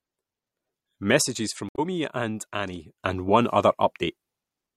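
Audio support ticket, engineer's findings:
One channel drops out, 1.22 to 3.0 s. Level of the speech falls abruptly by about 6 dB, then recovers. Likely one stereo channel lost upstream of the mono downmix, halving the shared signal.

Damaged data in a compressed stream, 1.69 to 1.79 s. Short glitch inside the dropout. Corrupt frames misread by the decoder, which loses sync and resumes at the next valid frame header.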